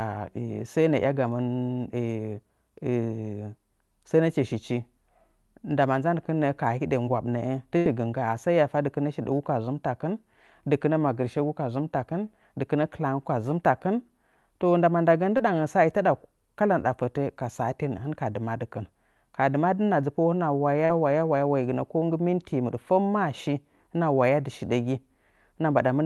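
Speech carried over a WebRTC call path, with an Opus-style band limit near 12 kHz that fits a bitrate around 32 kbps. A burst of packet loss at 7.77 to 7.87 s, just before "gɨ ngga'a sai hiya", leaves about 80 ms filled by the last sound continued and fading out, a smooth decaying smear on a spectrogram before the audio resumes further on. Short concealed packet loss at 15.37 to 15.41 s and 20.85 to 20.91 s gives brief smeared wobbles.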